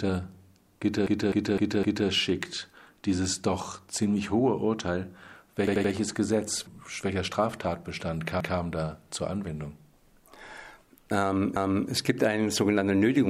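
Repeated frames stutter the audio at 1.07–2.09 s (a 256 ms block played four extra times), 5.67–5.93 s (85 ms, three extra), 8.40–8.58 s (171 ms, once more) and 11.56–11.90 s (341 ms, once more). Unlike an echo, each block replays identically, lengthening the audio.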